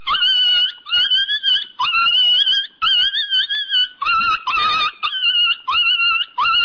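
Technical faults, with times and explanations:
No technical faults, with times and explanations, to report for this clip.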